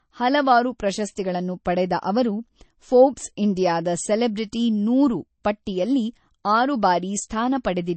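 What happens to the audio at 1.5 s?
At 1.5 s, as throughout the clip, the speech shows the marks of low-bitrate audio saved at a high bitrate: the material was likely squeezed through a low-bitrate MP3 encode first and then re-encoded at a far higher rate, which cannot bring back what was discarded. Nothing sounds above about 8.3 kHz, so the speech lacks air and crispness, and the grainy, smeared texture of that first heavy encode stays audible despite the larger file.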